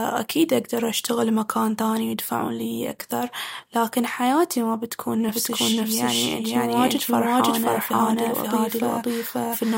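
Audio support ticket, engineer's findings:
Doubled audio track from 5.29 s, right after "لكن حياتي ما بتكون", to end of clip. Second full-band copy of the speech trails by about half a second at roughly equal level. Dry, no decay, starts abruptly. Likely cause: a slower second capture path also mixed into the output.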